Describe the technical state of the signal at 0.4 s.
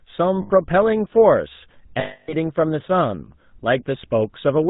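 Around 0.4 s the GSM full-rate codec is plainly audible: nothing above 4 kHz and a buzzy, gravelly roughness from pulse-driven vocal-tract modelling, unlike the smeary, watery artefacts of transform codecs. Lost GSM frames then run from 0.42 to 0.51 s, about 80 ms, which fits four missing 20 ms frames. The settings of the last good frame are repeated, giving a held, metallic ring rather than the silent gap or click of a plain dropout.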